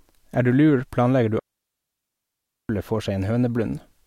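At 1.39 s the speech cuts out in a digital wireless dropout and stays gone until 2.69 s, a gap of 1.3 s. The receiver lost too much of the radio data to rebuild the signal, so it muted rather than pass on garbage. The hole is clean near-silence entered and left by very short fades, with no crackle or noise burst at either edge. On a waveform it is a flat band; on a spectrogram, a blank vertical strip.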